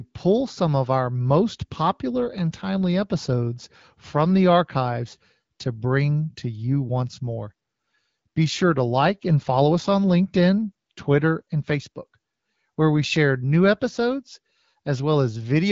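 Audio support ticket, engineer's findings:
Findings: no faults found; the speech comes through the AMR wideband (HD Voice) codec at 12.65 kbit/s with only light codec damage.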